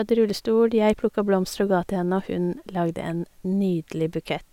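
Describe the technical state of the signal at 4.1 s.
At 4.1 s the speech signal is intact, with no dropout, clipping, glitch or other technical fault at that moment.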